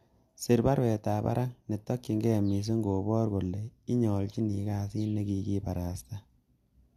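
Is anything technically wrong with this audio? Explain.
No, the speech signal holds steady throughout, with no technical faults to be heard anywhere in the recording.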